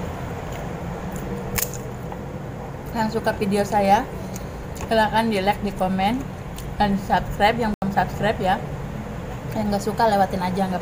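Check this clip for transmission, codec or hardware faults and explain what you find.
There is one fault, a block of digital silence, from 7.74 to 7.82 s. For 80 ms the sound drops to silence, likely because the output buffer wasn't filled in time. The sound stops abruptly and returns without a fade. That gives a short hole.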